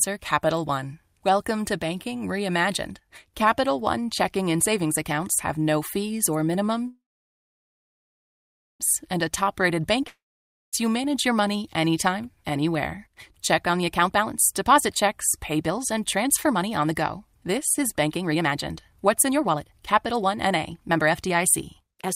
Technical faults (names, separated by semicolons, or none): call audio freeze; long network dropout; jitter buffer speed-up